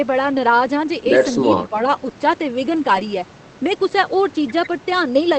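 Speech suppressed in double talk, 1.58 to 1.75 s: the level dips by a few decibels, and about a tenth of a second of sound in total is pulled down in patches. The likely cause is an echo canceller that confused the near talker with loudspeaker echo while both sides spoke, and attenuated everything.

Lost packet rebuilt from error correction, 2.95 to 3.04 s: the audio runs on without a gap, but a 20 ms stretch turns audibly rougher and noisier. That fits a single lost packet replaced by the low-bitrate Opus copy carried in the next packet.

Short concealed packet loss, 2.99 to 3.02 s: within that same stretch, 20 ms never arrived. The decoder extended the preceding sound for 11 ms and then blended back into real audio, which leaves a brief smeared, wobbly patch where the original detail is gone.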